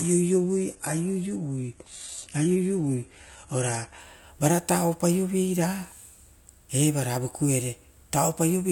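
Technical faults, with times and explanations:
0.0–4.0 s, adaptive stream starting at a low bitrate: for the first four seconds the speech is thin and smeared, with nothing above 11.7 kHz and an airy, synthetic-sounding treble. That fits a version of roughly 16 kbit/s that rebuilds its high band from the lower one. The player began there to start quickly. Once it had measured the connection, it switched at 4.0 s to a fuller stream of about 96 kbit/s, and clarity jumps suddenly with no gap.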